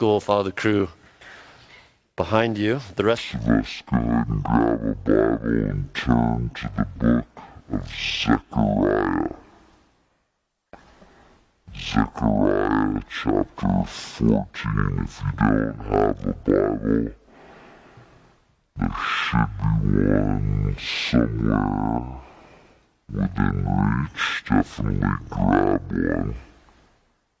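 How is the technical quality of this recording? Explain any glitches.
The recording has one serious fault covering almost all of it. A wrong sample rate runs from 3.18 s to the end. The samples are played back at half their intended rate with no conversion, which fits material recorded at 32 kHz being played at 16 kHz. Speed and pitch therefore fall together: everything runs at half speed and sits a full octave, 12 semitones, lower, so the sound is slow, dragging and deep.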